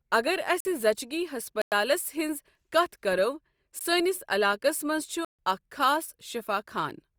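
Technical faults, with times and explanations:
0.60–0.65 s, 1.62–1.72 s, 3.79 s, 5.25–5.39 s: block of digital silence. The speech cuts straight to silence and back with no fade. The 3.79 s gap lasts about 17 ms, the 46 ms one fits a 2048-sample buffer, and the 102 ms and 139 ms gaps are audible holes.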